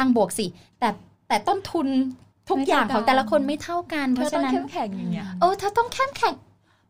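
No technical faults are audible.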